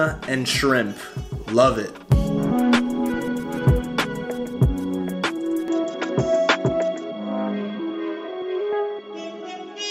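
At 5.68 s the sound abruptly narrows and stays that way to the end. Nothing remains above 7.6 kHz, so it turns duller. The level shifts by about 5 dB and a faint new background noise appears. No gap marks the change. The input likely switched to a poorer device.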